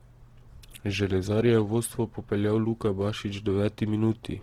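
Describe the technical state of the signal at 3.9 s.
At 3.9 s the speech carries Opus compression across the whole clip, likely from a low-rate music-mode encode near 16 kbps: starved bands get filled with folded or noise energy, so it sounds grainy and rough. A spectrogram shows speckled, smeared upper bands reaching about 20.2 kHz.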